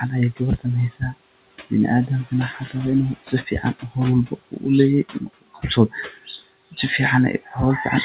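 Speech, with noise suppressor artifacts throughout: the steady background is pulled down by about 17 dB between phrases and rises under the voice. The suppressor also cuts speech it mistakes for noise at 0.9–1.15 s, 2.54–2.74 s, 3.26–3.64 s, 4.28–4.64 s and 5.13–6.41 s. Drops reach about 15, 9, 10, 15 and 18 dB, and quiet segments and word endings sound swallowed, most heavily in the longest stretch. The room noise sits about 17 dB below the speech, and nothing is heard above 4 kHz, which fits narrowband G.711 call audio.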